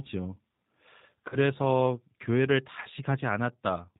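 Throughout the clip, the speech has passed through a G.729 codec. The character of the sound points to the 8 kbit/s G.729A variant. It rebuilds each 10 ms frame from a vocal tract filter, a pitch predictor and a handful of pulses, and nothing above 4 kHz survives. The damage is plainly audible: the speech stays intelligible but sounds muffled, slightly rough and synthetic.

From 1.29 to 1.37 s comes VoIP packet loss concealed by the speech codec. About 30 ms of audio went missing, which fits a single lost packet. With no incoming data, the decoder carried on from its last pitch and filter settings and lowered the gain frame by frame. That gap sounds like a brief stretched, buzzy tone or coloured noise that fades. Because each frame builds on the one before, the speech stays weak or distorted for a short while after data returns.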